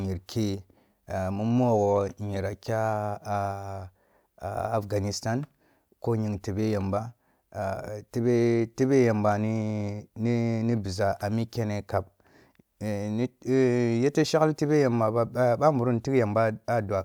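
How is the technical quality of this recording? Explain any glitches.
No audible glitches or faults.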